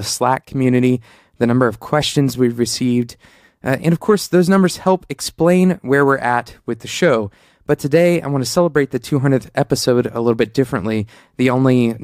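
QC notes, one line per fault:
No faults heard anywhere in this speech recording.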